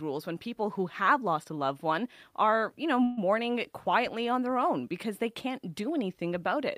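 Speech, with a call audio freeze from 3.03 to 3.19 s, between "one are you know" and "quietly on their own". The last sound is stretched across 139 ms, then speech resumes exactly where it stopped. Unlike a dropout, nothing is skipped and everything after is simply delayed, likely because the jitter buffer ran dry.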